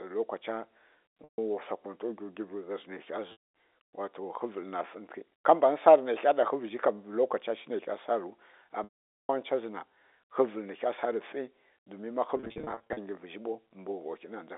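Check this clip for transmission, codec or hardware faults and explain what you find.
Yes, there is one fault: packet loss with pitch repetition, heard four times over the narrowband G.711 telephone line.

Packets went missing at 1.24–1.38 s (about 140 ms lost), 3.32–3.46 s (220 ms), 8.84–9.29 s (450 ms) and 12.37–12.97 s. At each gap the receiver repeated the last pitch period and faded it over about 50 ms. The first three losses were long enough for that held tone to sink into silence before the speech cross-fades back. The last one is 360 ms scattered across 600 ms in runs of no more than 40 ms, so it sounds like brief buzzy stutters rather than dropouts. The timing fits 10 ms packets.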